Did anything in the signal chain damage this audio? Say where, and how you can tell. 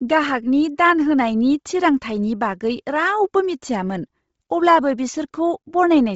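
Yes, at the codec stage, and the damage runs through the whole speech clip. Nothing reaches above 7.7 kHz, and what sits just below that edge is breathy, grainy noise rather than real detail. This points to a heavily squeezed stream at around 24 kbps with short 7.5 ms frames, most likely Bluetooth LC3 compression. The encoder drops the upper spectrum and fills the gap with shaped noise. A plain low-pass filter or a low sample rate would leave a clean, dull top with no hissy filler.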